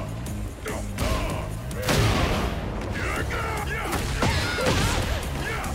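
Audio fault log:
0.98–2.43 s, CD scratch ticks: a blemish on the disc corrupted more data than the error correction could rebuild, once per revolution, so the player had to interpolate or mute the damaged samples each time the spot came round. The sound carries a regular train of eleven small ticks across this span, roughly seven or eight per second, each a brief glitch or micro-dropout lasting only a few milliseconds at most.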